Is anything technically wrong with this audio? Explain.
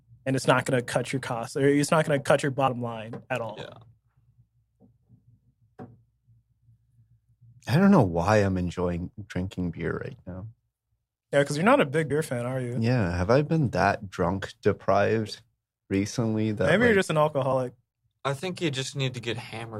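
Yes. Compressed frames skipped at 2.67, 12.10 and 17.51 s: two or three 21.3 ms frames go unplayed, so the speech jumps ahead.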